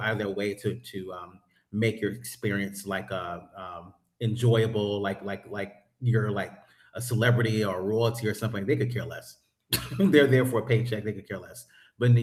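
No technical faults are audible anywhere in the speech.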